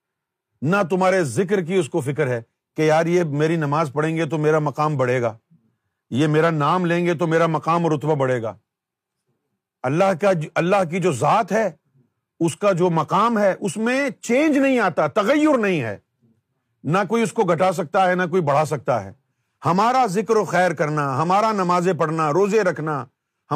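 Nothing in the speech stood out as a technical problem on listening.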